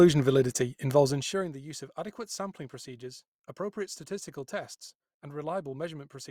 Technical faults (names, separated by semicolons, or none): zipper noise